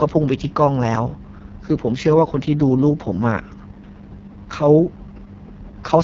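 From start to finish the speech has passed through the AMR wideband (HD Voice) codec at what sounds like its lowest mode, about 6.6 kbit/s. The thin model-driven coding leaves the voice rough and raspy, with heavy artefacts, and nothing survives above 7.4 kHz.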